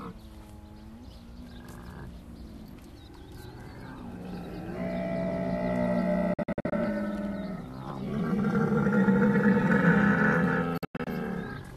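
Around 6.34 s the audio starts breaking up in a digital broadcast dropout. The receiver stopped getting clean frames and muted, leaving a cluster of short holes spread over roughly 0.4 s until 6.73 s, each snapped in and out with a 3 ms fade. It happens again from 10.78 to 11.07 s, where the holes include one longer silent stretch of 96 ms. Whatever was sent during those holes is simply gone.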